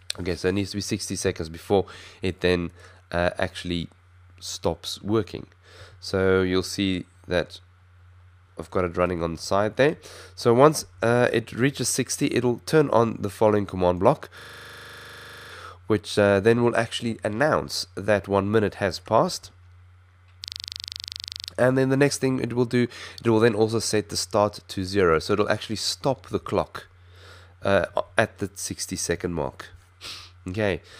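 At 14.40 to 15.52 s and again at 20.44 to 21.48 s, a system hang loop occurs: playback froze while the hardware kept replaying one 40 ms buffer, repeating it roughly 26 to 28 times. At a 25 Hz loop rate it sounds like a rough, stuttering buzz.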